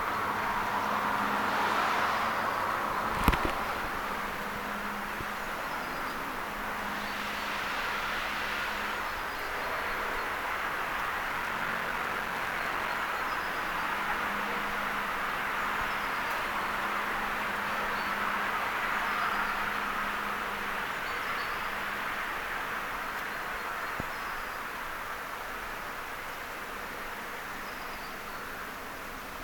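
From about 11.30 s to 12.98 s there's a block size mismatch (padded). One stage is handing over shorter blocks than the next one reads, and the leftover bit of each block gets filled with silence. That puts a tiny gap in every block, so you hear a buzz at around 46.9 Hz, which fits a 1024-sample read. The audio also drags, running at about 0.861 of normal speed, while the timbre stays the same.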